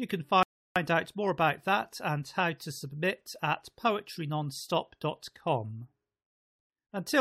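A speech clip with a rebuffering stall from 0.43 to 0.76 s, just before "out more about that": the player ran dry, paused about 0.33 s, then resumed exactly where it stopped, unlike a dropout, which loses audio.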